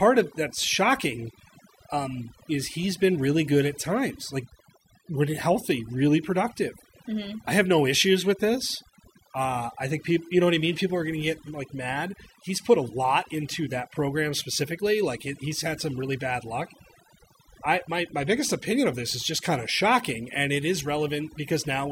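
Overdone noise removal runs through the whole speech clip. A noise reduction stage set too aggressively drives individual frequency bands down or off wherever they sit close to its noise estimate, so the background becomes near silence speckled with twinkling artefacts, and quiet parts of the voice are removed along with it.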